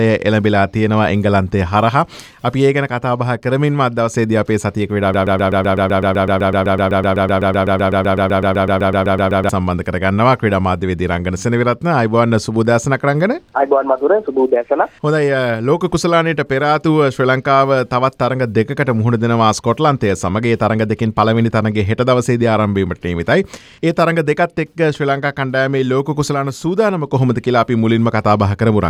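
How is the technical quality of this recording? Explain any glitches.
One glitch stands out. A broken-record loop runs from 5.14 to 9.49 s: a 0.13-second fragment repeats identically, back to back, some 34 times, producing a rapid stuttering buzz. The playback or encoding chain likely stalled and kept resending its last buffer, so the audio due in those four seconds is missing.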